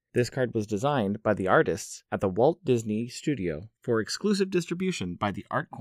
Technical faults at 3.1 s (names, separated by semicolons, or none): channels drifting apart